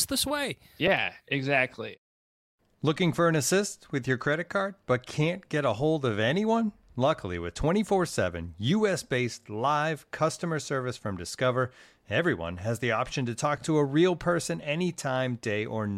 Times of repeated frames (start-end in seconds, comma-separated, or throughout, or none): 0.87, 9.39-9.46, 13.57-13.62